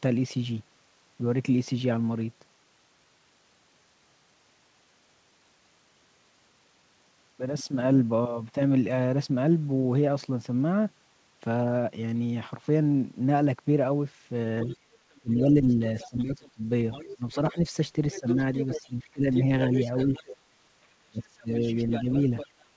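Other side's voice leaking through, 14.63 to 17.34 s: a second voice sits about 20 dB under the speech, likely far-end playback the echo canceller failed to remove from the microphone.

Speech suppressed in double talk, 14.66 to 19.29 s: the talker's voice dips by up to about 20 dB in pieces adding up to roughly one and a half seconds. With both sides talking at once, the canceller likely could not separate talker from echo and turned both down.

Other side's voice leaking through, 18.11 to 20.37 s: the second voice returns, now only about 10 dB below the speech and much easier to hear, likely the same uncancelled loudspeaker pickup.

Speech suppressed in double talk, 21.06 to 22.08 s: a deeper dip of about 30 dB, totalling roughly 0.4 s, pulls the voice down, likely the canceller again clamping down during overlap.

Other side's voice leaking through, 21.62 s to the end: the far-end voice stays about 10 dB under the speech until the clip stops, likely residual echo the canceller never removed. 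Nothing above 8 kHz comes through, which fits a G.722 call path at 64 kbps.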